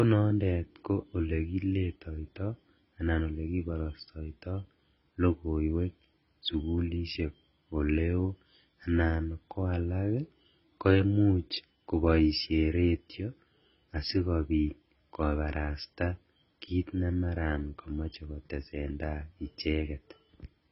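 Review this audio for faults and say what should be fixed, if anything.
AAC compression, throughout the clip: nothing sounds above 5.6 kHz, and the speech comes out dull and smeared, with fizzy, warbling sibilants. The damage is heavy and likely comes from AAC-LC at a very low bitrate, near 16 kbps, which discards the top octaves and starves the remaining bands. Encode at a much higher bitrate, or keep an uncompressed master, so the encoder never needs to cut the treble.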